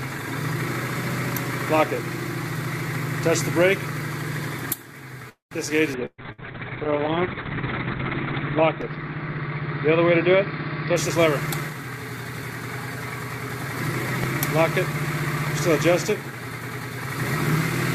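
At 5.29 s the audio stalls. The last sound is drawn out as a fading buzz or hiss that dies into about 140 ms of silence, and at 5.54 s it picks up exactly where it left off. This is a call audio freeze. Packets were likely held up in transit and the jitter buffer ran dry, so the receiver stretched out what it last had. About 220 ms of gap was inserted, nothing was lost, and the playback delay grew by the same amount.

Almost immediately afterwards, between 5.69 and 5.73 s, the audio lurches forward with barely any seam. About 70 ms of sound is gone and the two sides butt together. This skip ahead happens because later audio was already queued, so the receiver dropped a stretch rather than play it. That trims roughly 50 ms of the delay built up by the freeze.

From 5.98 s to 11.01 s the sound turns rough and dull, with a watery, smeared texture and no top end. This is a call bitrate drop. 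The bandwidth estimate collapsed and the encoder was pushed from 64 kbps down to 6 kbps, holding the lowest rate for about 2.1 s. At that rate the codec quantises coarsely and cuts the audio band from 20 kHz to about 4 kHz, which causes the muffling.

Inside that degraded stretch come two bursts of packet loss. From 6.06 to 6.21 s the last sound is held as a decaying buzz or hiss, falls to about 50 ms of silence, then resumes further on, with 120 ms of audio missing. A shorter one follows from 6.32 to 6.41 s, concealed the same way, with 60 ms gone. Both times, consecutive packets never arrived in time and the receiver faded out an extrapolation of the last sound.

Overlapping those losses, from 6.22 to 6.58 s, the sound drags at about 87% of normal speed without dropping in pitch, giving drawn-out sounds. This jitter buffer slow-down comes from the buffer running low. The receiver rebuilt its reserve by repeating single pitch periods and pause fragments again and again, adding about 54 ms in total.

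The opposite happens twice as the bitrate recovers. From 10.95 to 11.23 s the audio sounds noticeably hurried, at about 129% speed. From 11.69 to 12.56 s it runs a milder 112%. Pitch stays put both times. These are jitter buffer speed-ups: too much audio had piled up, so the receiver cut out short runs of pitch periods to shed delay, removing around 100 ms in each episode.

Finally, two sharp pops sit on top of the sound, which carries on beneath them. The first, from 14.24 to 14.26 s, peaks about 15 dB above the signal. The second, from 15.47 to 15.49 s, is about 10 dB above it. Each is a single loud pop, most likely a voltage step or spike from a connector, switch, static discharge or driver glitch, shaped into a brief click-thump by the circuitry that follows.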